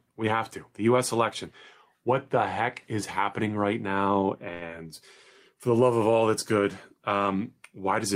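Right after "is happening right now", from 4.53 to 4.63 s, the sound is held and stretched for about 80 ms with a faint buzzy sustain before it resumes, losing nothing. This is a short stall from a late packet: the jitter buffer ran dry, and playback stretched the last sound until the delayed data arrived, adding 81 ms of delay.

Just after, from 4.68 to 4.71 s, there is a quick smear as roughly 40 ms of audio drops out. This is short concealed packet loss: the decoder filled the gap by carrying the preceding sound forward, then blended back, pulling the delay back by about 30 ms.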